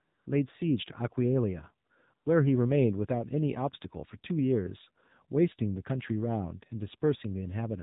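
Throughout, the speech carries AMR narrowband mobile codec damage. The band stops at 4 kHz, and the voice sounds plainly buzzy and synthetic, as a few excitation pulses per 5 ms subframe drive a vocal-tract model. The coarseness fits a low rate around 7.4 kbps.

AMR comfort noise fills three gaps where speech frames stopped: 0.00 to 0.26 s, 1.88 to 1.90 s, and 2.14 to 2.26 s (255, 20 and 120 ms). The real background is replaced by smooth, steady synthetic noise that switches abruptly in and out.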